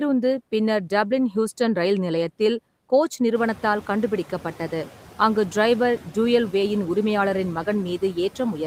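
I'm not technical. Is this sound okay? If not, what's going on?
No. The clip has noise suppressor artifacts from start to finish. A noise suppressor is a filter that tries to strip out steady background hiss, and here it pulls that hiss down only partway. The background noise dips in the gaps between words and comes back up underneath them, so it pumps in step with the speech. From about three and a half seconds the room noise gets louder, which is part of the recording itself.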